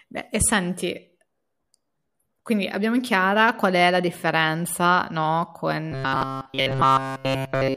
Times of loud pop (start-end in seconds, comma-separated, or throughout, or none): none